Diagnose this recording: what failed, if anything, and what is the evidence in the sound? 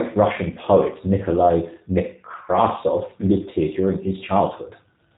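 Codec stage: a G.729 codec rebuilt the speech from filter and pulse parameters, so it sounds plainly rough and synthetic throughout, with nothing above 3.8 kHz.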